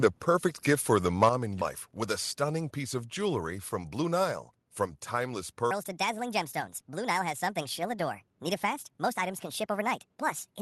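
From 1.22 to 1.28 s the microphone input was likely set too high, so the loudest peaks drove the converter past full scale by about 4 dB. This is microphone overload: the waveform tops are sliced flat on a small share of samples, and that brief stretch gains a harsh, crackly edge, set against the Opus call path's clean cut-off near 12 kHz.

Right after, at 1.29 to 1.30 s, the microphone volume stepped down by about 6 dB, likely the kind of single-step input cut call software makes when it detects clipping. Everything, voice and room alike, drops abruptly in level, and the quieter setting persists from that moment on, so the overload is followed immediately by a noticeably softer sound.

At 1.61 s there is a skip ahead, just before "with a stunning piece". Roughly a fifth of a second of audio was discarded while later packets were already waiting, and nothing was inserted to cover it. Playback lurches forward, the sound on either side butts together almost seamlessly, and a short piece of the utterance simply disappears, leaving a clipped, slightly jumpy join.

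From 3.58 to 4.12 s, right after "stunning piece of jewelry", comes a jitter buffer speed-up. The receiver was holding more audio than its target, so it trimmed short pitch-period-sized slices again and again, removing around 50 ms in total. The delivery runs at about 109% of normal pace while pitch stays put, so the phrase sounds slightly rushed rather than higher.

From 5.71 s to the end of the clip a whole section is at the wrong speed, most likely from playing it against a mismatched clock. It runs 1.54 times too fast, and because speed and pitch move together the voice lifts by about seven semitones. The result is a chipmunk-like, hurried delivery that switches in abruptly and continues through to the final moments.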